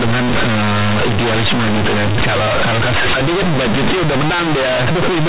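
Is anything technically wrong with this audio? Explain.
Yes. All the way through, this speech has companded audio read as linear: mu-law bytes are being played straight as linear 8-bit samples without expansion. Every sign flip jumps across half the range, so quiet bits blow up to full size, giving loud, buzzy distortion and heavy noise in the pauses.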